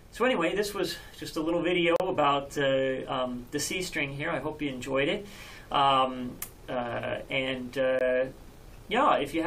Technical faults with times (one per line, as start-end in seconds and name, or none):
1.96-2.00 gap between stream segments
7.99 gap between stream segments